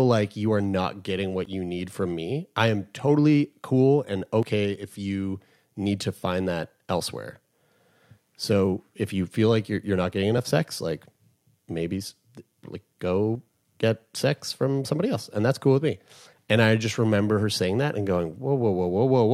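At 1.45 s ("you are not getting"), 4.43 s ("am totally cool and"), 10.38 s and 13.35 s (before "get sex from somebody"), brief skips of roughly 30 ms are spliced shut. The spacing suggests audio missing between chunks, likely from 3-second processing blocks losing samples at each handover.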